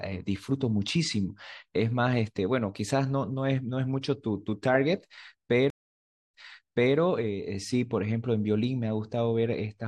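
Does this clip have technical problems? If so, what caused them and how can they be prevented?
Yes. At 5.70 s the speech cuts to about 0.62 s of silence, then picks up about 0.65 s earlier, repeating a moment already heard, with the disturbance over by roughly 6.97 s. This is a stream reconnect: the connection dropped, the player reconnected, and the server resent a burst from before the break to a freshly started decoder. A more stable network path and a larger client buffer that rides out brief dropouts would prevent it.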